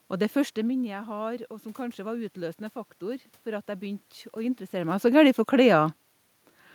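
From 0.84 to 4.12 s there is automatic gain rising. After the talker moves away around half a second in, dropping the input by about 12 dB, the gain control slowly adds about 4 dB, so voice and room noise swell together.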